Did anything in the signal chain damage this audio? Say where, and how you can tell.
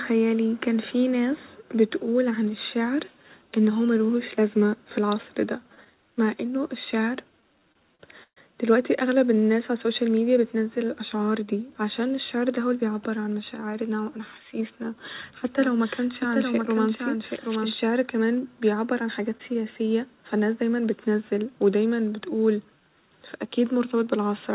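Yes. Network and jitter buffer: repeated stalls (stutter) at 5.60–5.88 s, after "لازمة ف العصر ده", and 7.42–8.38 s, before "دلوقتي أغلب الناس ع". The buffer ran dry three then four times, the longest gap 130 ms. Spectrograms show frozen, repeated harmonics that fade in the longer holds.

Jitter buffer speed-up at 12.42–13.08 s: the receiver trimmed pitch-period slices, about 70 ms in total, so the sound runs about 9% fast at unchanged pitch. On a waveform, periods look slightly fewer, with no visible gap.

A doubled audio track runs 15.45–17.77 s: a full-band copy about 5 dB quieter trails by about 0.7 s, likely from a second, slower capture path or a misaligned edit. It appears and vanishes abruptly, shows no reverb tail, and ghosts the spectrogram sideways.

Short concealed packet loss at 19.38–19.41 s, just before "سياسية فناس دايما بتنزل": a brief smear where the decoder extrapolated the last frame and then blended back, with a little content lost. 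Within this narrowband path, empty above 4 kHz, it shows as a short blurred stripe.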